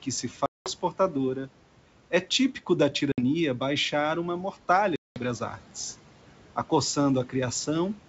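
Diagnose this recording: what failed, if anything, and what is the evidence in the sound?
The failure is at the network stage: packet loss on an ADPCM call. Hard-edged silent holes open at 0.46 to 0.70 s (before "portadora é típico da"), 3.12 to 3.23 s (between "portadora é típico da" and "baixar uma") and 4.96 to 5.22 s (before "as artes"). About 200, 60 and 200 ms of audio are lost, which fits roughly ten, three and ten packets. Each hole is followed by slightly distorted speech that settles within tens of milliseconds. That recovery tells it apart from a plain buffer dropout. It shows the G.722 decoder's predictor and step size resynchronising after losing step with the sender's.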